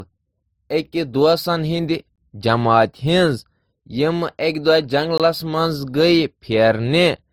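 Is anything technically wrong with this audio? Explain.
Yes, two things. Across the whole speech clip there's a layered texture, like two different compression artefacts stacked on top of each other. That's likely transcoding between lossy codecs, probably an MP3 at around 52 kbit/s re-encoded to Opus at about 48 kbit/s. The second encoder wastes bits on the first one's damage and adds its own.

Then there's a gap between chunks, a 20 ms dropout to silence at 2.16 s and again at 5.18 s. The spacing fits audio sent in 3-second chunks, with silence inserted at each join. No sound goes missing, but the flow gets chopped at those two points.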